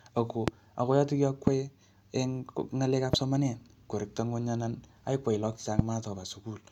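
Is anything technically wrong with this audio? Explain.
Yes, there are four loud pops over the speech, at 0.48–0.50 s, 1.47–1.50 s, 3.13–3.16 s and 5.79–5.82 s. Each is a single sharp hit lasting a couple of hundredths of a second and peaking at about 20 dB above the speech, which carries on underneath. The likely cause is an electrical step or spike, from a connector, switch, static or a driver hiccup, getting into the signal chain and being shaped into a short thump.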